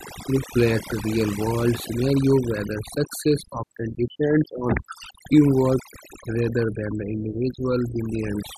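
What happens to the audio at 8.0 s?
At 8.0 s the speech is still under the overdone noise removal that runs through the whole clip. Bands near the estimated noise floor are pushed down hard, so the background drops and breaks up into twinkling specks. A noise gate would instead cut everything at once.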